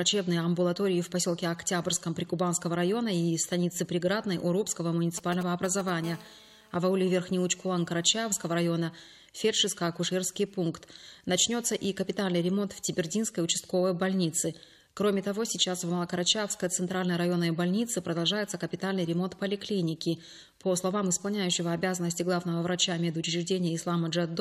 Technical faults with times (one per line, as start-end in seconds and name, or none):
5.18-5.90 GSM signalling bursts
6.04-8.60 GSM phone buzz